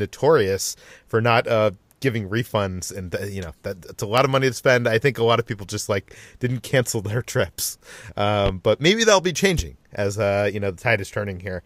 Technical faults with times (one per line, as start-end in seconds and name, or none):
8.46-8.50 loud pop
9.59-9.62 loud pop